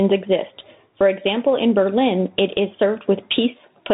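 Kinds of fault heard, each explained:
Gain pumping: The level breathes throughout this speech. The gain ducks under every loud sound, with a swing of roughly 15 dB. Loud and soft parts sit close together. The likely cause is excessive input gain driving a fast limiter.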